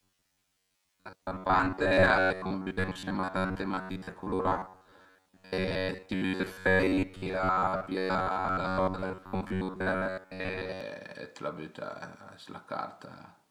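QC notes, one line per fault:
0.01 to 10.8 s, robotic sound from repeated short buffers: the voice turns into a rigid metallic buzz at 93.8 Hz that loosely follows the speech. Likely cause is late-arriving audio, with the last roughly 11 ms looped for most of this stretch while real audio is skipped.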